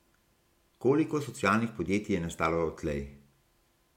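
No technical faults can be heard anywhere in the speech.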